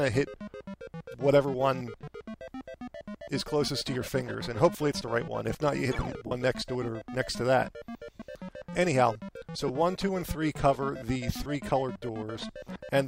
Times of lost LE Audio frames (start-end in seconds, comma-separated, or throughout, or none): 2.01-2.03, 4.05, 6.27-6.31, 8.15-8.20, 9.68, 11.43-11.46